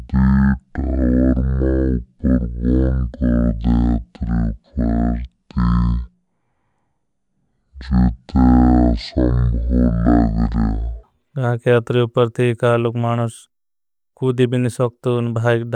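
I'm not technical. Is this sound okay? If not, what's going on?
No. From the start to 11.03 s the speech is deep and slow, playing at half speed: a section at the wrong speed, likely from being played on the wrong clock.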